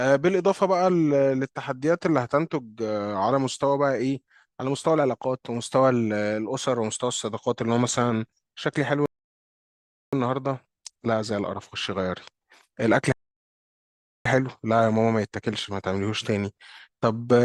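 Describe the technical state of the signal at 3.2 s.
At 3.2 s the speech signal is intact, with no technical fault audible at that point.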